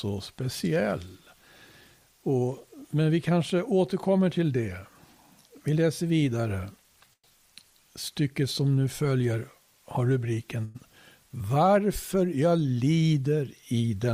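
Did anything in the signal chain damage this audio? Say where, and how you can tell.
Yes. At the network stage there is a call audio freeze at 7.13–7.26 s and again at 10.65–10.77 s. Each time the last sound is stretched into a fading buzz for about 0.1 s, and the first one drops to silence for its final 70 ms. Then the audio resumes where it stopped. The likely cause is delayed packets emptying the jitter buffer, so each pause adds about 0.1 s of delay without losing anything.

At the buffer stage, 13.88–14.12 s shows a jitter buffer speed-up. The sound runs at about 112% speed while the pitch stays the same, so it sounds hurried. The receiver cut around 40 ms in short pitch-period slices to drain excess buffered delay.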